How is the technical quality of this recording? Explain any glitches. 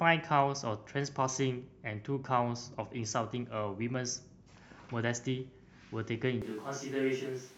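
There is one clear glitch near the end. A switch to a distant microphone occurs at 6.42 s and lasts to the end of the clip. The sound turns abruptly roomy and hollow, with thinner bass, a level drop of roughly 5 dB, and background noise rising to sit only about 25 dB below the speech. The most likely cause is that the close microphone's feed dropped out, leaving a microphone further from the speaker to carry the recording, so far more of the room's reflections and ambience are captured.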